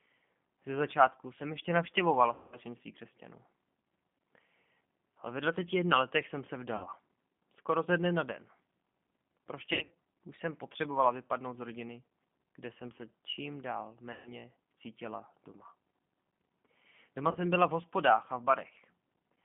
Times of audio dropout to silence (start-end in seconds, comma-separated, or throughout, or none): none